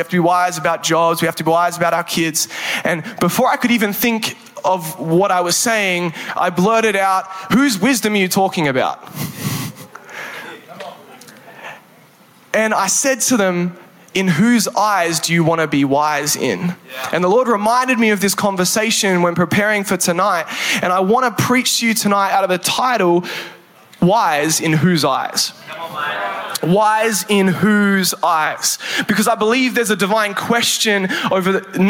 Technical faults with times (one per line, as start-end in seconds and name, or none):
0.00-31.90 gain pumping